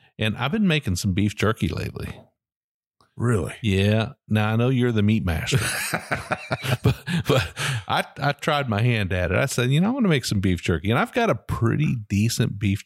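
Nothing goes wrong anywhere in this speech recording, so there's no fault to walk through.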